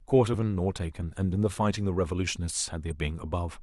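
Short speech clip with one real problem: at about 2.90 s there's a quick glitch, a brief blip lasting about 18 ms, and that's damaged data in a compressed stream. Some bytes in the encoded file got lost, zeroed or overwritten right there, so the decoder couldn't make sense of those frames, dropped sync for a moment and hunted for the next valid frame header before carrying on.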